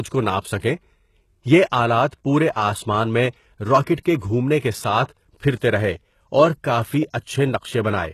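Across the whole speech clip, the treble sounds plainly damaged. The likely cause is HE-AAC compression, at a rate that fits about 16 kbps. Nothing is heard above 12.3 kHz. The upper band is rebuilt from copied lower bands, so s sounds turn gritty and metallic.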